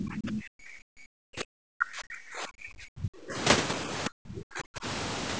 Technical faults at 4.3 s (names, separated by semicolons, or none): speech suppressed in double talk